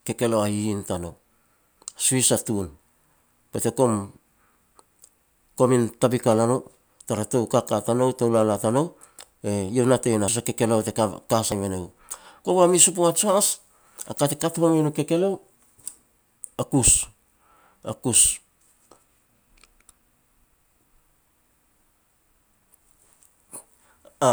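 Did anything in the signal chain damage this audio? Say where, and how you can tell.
Yes, at the driver or buffer stage. Three abrupt jumps in the speech land at 9.4 s, 10.28 s (between "natei no" and "a kekeleo te ka") and 11.52 s (just after "a kekeleo te ka"), with no gap of silence. The likely cause is a dropped buffer (overrun): capture fell behind, the hardware overwrote unread samples, and the surviving audio was spliced together, losing about 40 ms, about a tenth of a second, and about 40 ms respectively.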